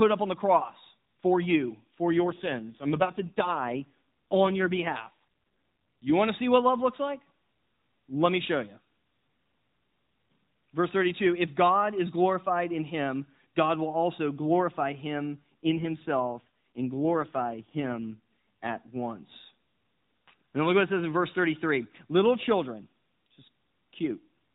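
From 2.18 to 6.14 s, after "cross for you for", and again from 15.63 to 18.99 s, after "will also glorify him", an AMR rate drop makes the speech buzzier and more synthetic, which fits a fall from 12.2 to 5.9 kbps. The spectrogram keeps its 4 kHz ceiling and the waveform shows no gap, but harmonics smear.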